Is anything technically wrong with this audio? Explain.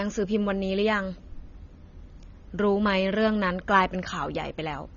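Yes. Throughout the speech, likely AAC compression at a low bitrate, around 24 kbps, discards detail: nothing survives above 6.9 kHz, leaving it dull, smeared and fizzy.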